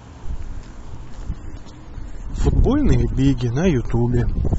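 Speech, and at 1.30 s the sound quality drops suddenly and stays degraded to the end, with codec artefacts rising. This is an adaptive stream at a lower bitrate, where the player switched to a cheaper version when the connection slowed, which fits a step from about 96 kbit/s AAC down to roughly 27 kbit/s. Unlike a buffering stall, there is no gap or repeat at the switch, only an abrupt change in quality.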